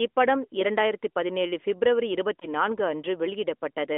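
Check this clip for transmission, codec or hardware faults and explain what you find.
One transmission fault is present, heard through an AMR narrowband mobile codec path limited to roughly 250 Hz to 3.5 kHz.

Lost AMR speech frames, 2.40 to 2.47 s, just after "இப்படம் இரண்டாயிரத்து பதினேழு ஃபிப்ரவரி": a corrupted frame failed its checksum, so the decoder repeated the previous pitch and vocal-tract parameters at reduced gain. The result is a short dip and warble, consistent with a single lost 20 ms frame.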